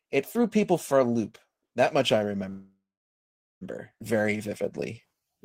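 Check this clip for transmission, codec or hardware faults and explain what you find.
Yes, there are three faults in this speech clip: a call audio freeze, a skip ahead and a jitter buffer slow-down.

The call audio freeze runs from 2.49 to 3.63 s, right after "much I". The most likely cause is packets held up in transit until the jitter buffer ran dry. The receiver then extended the last sound artificially, and that fill decays into about 0.8 s of silence. When delivery resumes, speech continues exactly where it stopped. Unlike a skip, nothing is lost: about 1.1 s of delay is simply inserted.

The skip ahead comes at 3.99 to 4.02 s. Here a stretch of around 0.7 s of audio was discarded, either in transit or by an overflowing jitter buffer, while newer audio was already queued. Playback leaps forward, and the two sides are butted together with only about 10 ms of fill between them. It is the mirror image of the freeze: there is no pause to hear, but speech is missing and the delay shrinks.

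The jitter buffer slow-down runs from 4.17 to 5.39 s. To rebuild its reserve, the receiver repeated single pitch periods and small pieces of pauses many times over. This adds about 107 ms, so speech plays at roughly 92% speed with sounds drawn out. Pitch stays the same, which separates it from a tape-style slowdown where everything would also drop lower.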